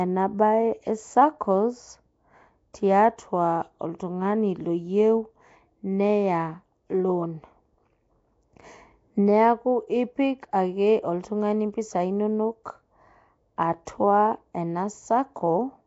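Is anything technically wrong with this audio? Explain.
Yes. Two faults can be heard.

Throughout the speech there is a rough, hissy halo and a smeared, underwater quality. Nothing is present above 7.7 kHz. The damage is plainly audible. This is likely Nellymoser compression, the old Flash microphone codec. It codes short blocks with a fixed, small bit budget. Weak bands get no bits and are filled with noise. The texture fits a rate around 32 kbps.

At 13.85 s there is pre-echo. A brief hiss of about 16 ms comes just before a sharp attack, and the attack sounds softened. The codec spreads its quantisation noise across a whole transform block. Here the attack falls late in the block, so noise sized for the loud part also fills the quiet moment before it.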